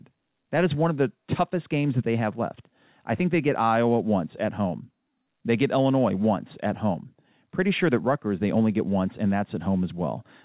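No technical faults are audible.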